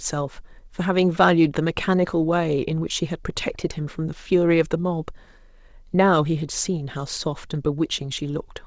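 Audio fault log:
No faults heard anywhere in this speech recording.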